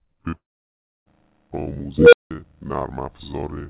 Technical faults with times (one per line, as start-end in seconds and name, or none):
0.30-0.34 short concealed packet loss
0.34-1.08 long network dropout
1.98-2.31 unstable filter